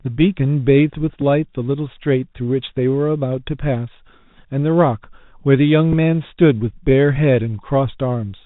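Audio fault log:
throughout, Bluetooth CVSD headset codec: speech band stops near 4 kHz, s sounds turn scratchy and a granular hiss sits underneath, unlike smoother narrowband codecs.
1.21 s and 5.93 s, Bluetooth headset packet repeated: each is a small isolated tick, about 3.8 ms re-decoded, fitting one lost packet, too brief to build the steady 267 Hz buzz.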